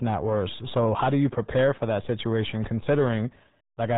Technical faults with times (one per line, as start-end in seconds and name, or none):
0.00-3.97 RealAudio 14.4 codec